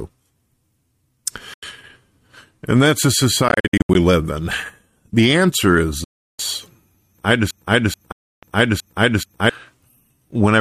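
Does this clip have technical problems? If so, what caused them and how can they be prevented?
Yes. The speech cuts to silence at 1.54–1.63 s, 3.48–3.95 s (about 276 ms of scattered gaps, the longest 73 ms), 6.04–6.39 s and 8.12–8.43 s, then resumes as if it had played on. The likely cause is a Bluetooth dropout: audio packets missed their deadline at the headphones and were discarded. Keeping the headset close, with a clear line of sight and away from busy 2.4 GHz traffic, prevents it.

From 7.51 to 9.50 s, a 431 ms fragment plays five times back to back, and the audio meant for that stretch never arrives. This broken-record loop likely comes from a stalled player or stream that kept resending its last buffered fragment. A steadier stream, with enough buffering and decoder resources, prevents it.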